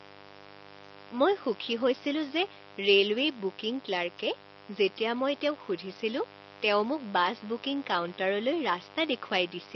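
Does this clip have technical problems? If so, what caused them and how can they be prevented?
Yes. Mains buzz runs through the whole recording, sitting about 15 dB below the speech. It is a 50 Hz buzz, but sharp switching spikes arrive twice per mains cycle, so its harmonics stack up into the kilohertz range and give it a raspy edge. Plain hum would be a smooth low tone. The room noise, about 48 dB below the speech, is ordinary background and not part of this fault. To prevent it, keep dimmers and rectifier supplies away from the audio path and use properly shielded, grounded cables.

The speech also sounds rough and grainy from start to finish, with noise filling the gaps between harmonics and a top band that sounds lowered or synthetic. The likely cause is low-delay AAC compression (AAC-ELD), the codec used in video calls. The damage is plainly audible, which fits a low bitrate around 24 kbps. 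Unlike the steady buzz, this graininess comes from the codec coarsely quantizing its frequency lines frame by frame. To prevent it, give the call codec a higher bitrate or use a wideband codec setting.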